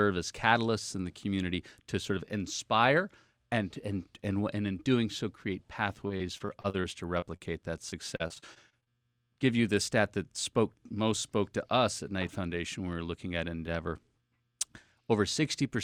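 Repeated packet loss (robotic sound) runs from 6.07 to 7.42 s and again from 7.90 to 9.02 s. Data kept going missing in quick succession, and each hole, the longest about 43 ms in the first stretch and 37 ms in the second, was patched by stretching out the sound just before it. With roughly a fifth of each stretch concealed this way, the audio turns choppy, with small pieces gone.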